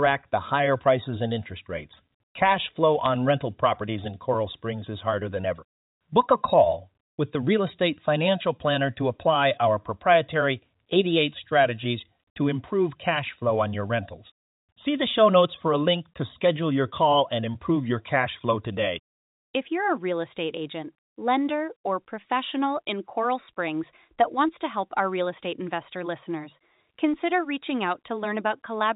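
A sharp tick breaks into the speech at 3.06 s, a tiny click lasting only a couple of milliseconds before the sound carries on unchanged. It comes from bit errors on a digital phone line, at a rate of roughly a fifth of a percent. A few flipped bits landed on high-order or sign positions of the 8-bit mu-law samples in this 64 kbps G.711 stream, and the corrupted values jump far from their neighbours to produce the tick.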